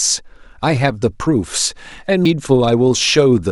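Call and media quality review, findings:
CD skip at 2.25 s in the speech: tick with a very brief mute, then playback resumes from a different point. Probable component: disc transport, laser jumping to another turn of the spiral. Unlike a network dropout, there is no audible gap, only a discontinuity in the content.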